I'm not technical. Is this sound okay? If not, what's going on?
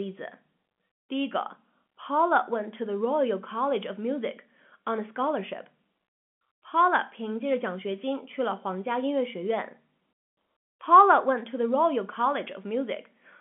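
Yes, it's fine; nothing here is going wrong.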